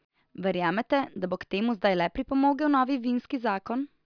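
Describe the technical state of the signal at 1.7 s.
At 1.7 s the speech signal is intact, with no audible technical fault at that moment.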